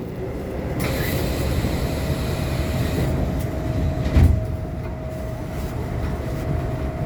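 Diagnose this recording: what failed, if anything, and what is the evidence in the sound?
Nothing in this recording of sounds points to a failure at any stage of the chain. No moment in the audio gives evidence that calls for a diagnosis.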